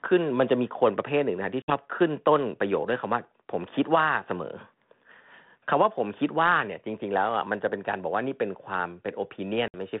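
Packet loss on an ADPCM call cuts in at 1.62 s and 9.68 s. Each time, 60 ms falls silent. The decoder's predictor loses track, so speech returns briefly distorted.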